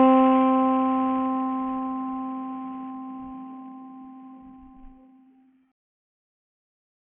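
Bluetooth SBC compression damage runs through the whole of this music clip, from start to end. The treble is thin and unstable, flickering in and out, and a gritty, grainy noise with aliased edges sits on top of the sound. The likely cause is a Bluetooth link with a very small bit pool, which fits a rate of around 48 kbps. The codec splits the audio into a few wide sub-bands and hands out bits without any hearing model. At that rate the upper bands get almost nothing, and everything else is quantised coarsely.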